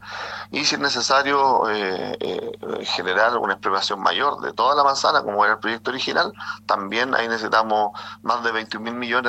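No technical faults can be heard anywhere in this clip.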